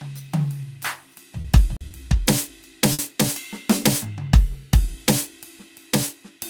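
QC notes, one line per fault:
1.41–1.46 s, 1.77–1.83 s, 1.89–1.93 s, 2.93–3.01 s, short stall from a late packet: the jitter buffer ran dry and the last music was stretched for about 30, 40, 20 and 60 ms, then resumed where it had paused. Nothing is skipped, which separates this from packet loss, which cuts material out.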